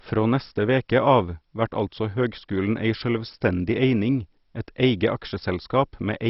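Throughout the speech, the audio is dull, with nothing above about 5.6 kHz, and carries a gurgling, granular roughness. This is likely heavy MP2 compression at a very low bitrate, around 32 kbps, which starves its sub-bands of bits. The flickering, coarsely quantised bands set it apart from a clean low-pass filter.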